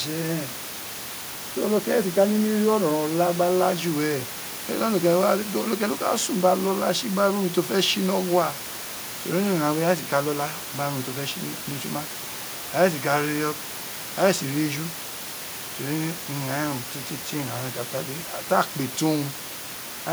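Nothing stood out on listening to this speech recording, apart from the room's own background noise, which sits about 15 dB below the speech.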